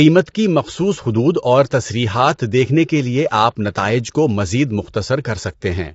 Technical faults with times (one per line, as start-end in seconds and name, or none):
0.00-5.95 low-delay AAC compression